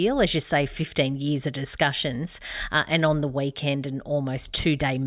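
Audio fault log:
No fault can be heard in this speech recording. There is nothing to log for it.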